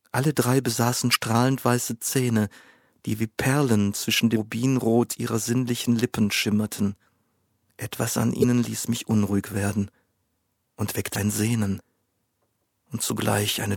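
Short blips cut through the sound at 1.11 to 1.16 s, at 4.35 s, at 8.40 to 8.45 s and at 11.12 to 11.16 s. This is damaged data in a compressed stream: corrupted bytes make the decoder misread frames and lose sync until it finds the next valid header.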